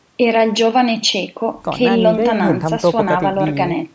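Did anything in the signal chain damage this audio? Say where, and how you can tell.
No, nothing in the chain damaged this speech. It has passed through a call's microphone processing, which trims the lowest bass and leaves nothing above 8 kHz, as that stage normally does.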